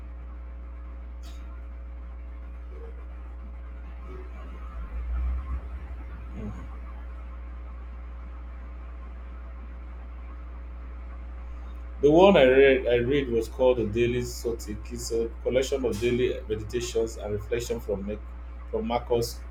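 From the first second to the last, mains hum sits under the speech: a steady, pitched drone at 60 Hz with a few low harmonics, roughly 15 dB below the speech level, so it stays plainly audible in the pauses. Power-line current has leaked into the signal path, likely through a ground loop or a nearby transformer. Unlike rumble from wind or handling, which is unpitched and fluctuates, this tone holds one fixed pitch and never changes in level.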